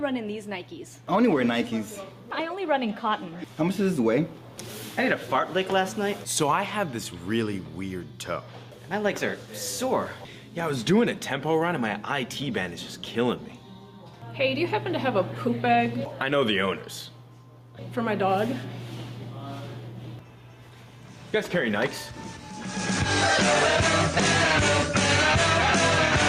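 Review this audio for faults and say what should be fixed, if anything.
Gain pumping runs through the whole clip. The input gain is likely set far too high, so a fast limiter clamps down on each loud sound and lets go in the gaps. The gain swells between loud moments and ducks under them, a swing of around 5 dB, leaving the dynamics squashed. Lowering the input gain so peaks stay below the limiter's threshold would prevent it.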